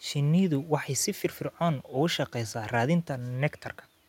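Nothing technically wrong can be heard in this speech recording: the signal is continuous and undistorted, and the only other sound is the room's own background noise, sitting about 42 dB below the speech.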